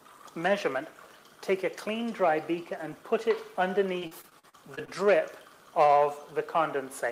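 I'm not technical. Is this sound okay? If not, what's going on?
No. From 3.99 to 4.89 s, repeated packet loss cut eight short gaps, each patched by stretching the previous sound, so it turns choppy and robotic.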